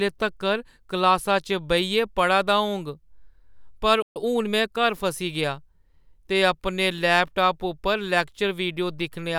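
At 4.02 s the speech cuts out for about 134 ms, likely a playback stall from the player starving for data, leaving a flat, empty gap in the waveform and a blank vertical band on the spectrogram. From 4.16 to 5.04 s a time-compressed catch-up follows: the player trims and cross-fades small pieces to recover, so speech runs about 1.15 times fast at unchanged pitch, its spectrogram harmonics staying level while syllables crowd closer together.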